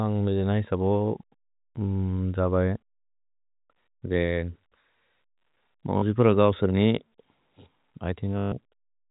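At 5.98 s a 40 ms stretch is replaced by packet loss with the last packet repeated, and at 8.38 s the same happens for 140 ms. The receiver looped the last audio it had, which fits 20 ms packets. The longer run buzzes at about 50 Hz. Unlike a silent dropout, sound never stops, and unlike a smooth concealment fade, it stutters robotically over the telephone-band G.711 audio.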